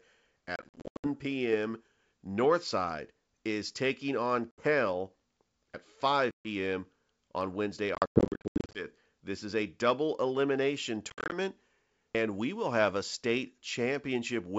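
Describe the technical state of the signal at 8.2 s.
At 8.2 s the sound sits inside a burst of packet loss on an ADPCM call running from 7.95 to 8.86 s. About 520 ms of audio is missing, scattered over roughly 800 ms, as hard-edged silent holes up to 100 ms long. A plain dropout would simply resume. Here the receiving decoder's adaptive predictor and step size lose step with the sender's, so each return comes back with brief distortion, settling within tens of milliseconds. The G.722 wideband coding keeps its clear 7 kHz bandwidth around the gaps.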